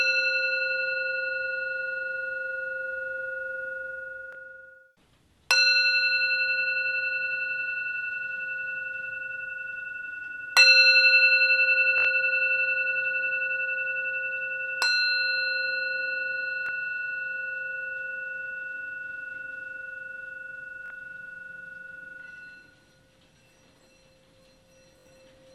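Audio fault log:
4.33–4.35, 11.98–12.05, 16.66–16.69, 20.86–20.90 and 24.99–25.06 s, Bluetooth stutter: the link dropped or delayed data five times, and the receiver kept replaying its last chunk to fill the gap. The 21 ms gaps at 4.33 and 16.66 s are single repeats, which fits one lost packet. The 43 ms gap at 20.86 s and the 64 ms gaps at 11.98 and 24.99 s loop the same slice back to back, so they buzz. After each gap the audio picks up further along, as if it had kept playing.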